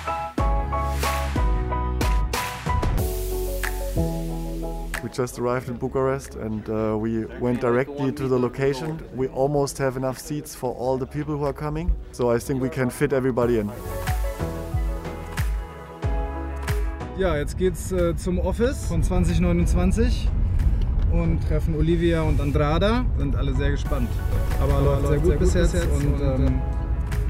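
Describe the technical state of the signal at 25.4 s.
At 25.4 s the audio is heard twice: a second, full-band copy trails the original by around 200 ms, about 5 dB quieter, with no decay or room colour, so everything smears into a hard, slapback-like echo. This doubled audio track runs from 24.32 to 26.48 s, starting and stopping abruptly. The likely cause is the same signal being mixed in a second time through a slower path, holding two copies out of step.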